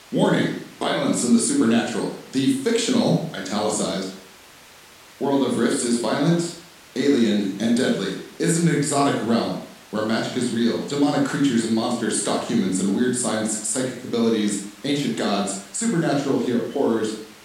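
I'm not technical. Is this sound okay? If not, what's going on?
Yes, this sound is okay, and nothing is going on with it that needs fixing.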